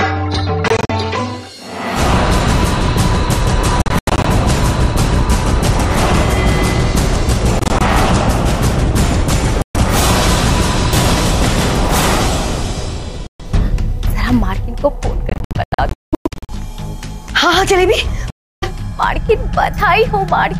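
Bluetooth dropouts at 0.68–0.91, 3.82–4.26, 7.59–7.82, 9.62–9.76, 13.27–13.41, 15.30–16.50 and 18.30–18.64 s cut the sound to silence in short, hard-edged holes, likely from packets arriving too late at the headphones. The sound resumes further on, as though it had kept playing. The 15.30 s episode is the worst, losing about 0.75 s in gaps of up to 192 ms.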